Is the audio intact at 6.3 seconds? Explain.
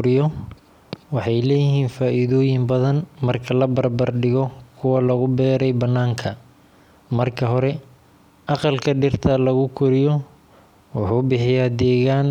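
Yes, the audio is intact at 6.3 seconds, with no fault to be heard at that moment.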